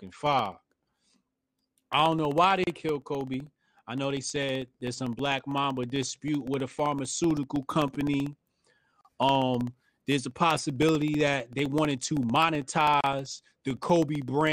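A fine, regular ticking runs under the speech from 0.07 s to 14.47 s, a click every 0.064 s, about 15 per second, audible only while sound is present. These are periodic USB or driver dropouts. Something blocks the USB bus or audio driver on a fixed cycle, and each time roughly a millisecond of audio is lost and replaced by silence. The repeated gaps, around two hundred of them, produce the steady tick pattern.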